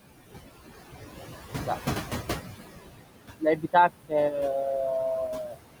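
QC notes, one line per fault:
Throughout: noise suppressor artifacts. The suppressor pulls steady background down by about 15 dB in bands it judges to be noise, frame by frame, so the room noise dips in pauses and swells back under speech.
3.38–3.90 s and 5.47–5.58 s: speech cut by the noise suppressor. Quiet speech energy was classed as noise and attenuated with the background, by about 21 dB at worst in the first stretch and about 15 dB in the second. Roughly 150 ms and 100 ms respectively are affected, so the affected speech sounds swallowed or faint.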